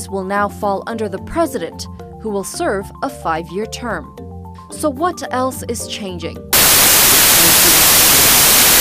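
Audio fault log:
6.53–8.80 s, wrong sample width: packed 24-bit data are read as 16-bit, so many values splice bytes from different samples. Loud broadband noise buries the original, which plays at 0.667 times speed and lower pitch. The spectrogram fills almost solidly, and the waveform becomes a dense block.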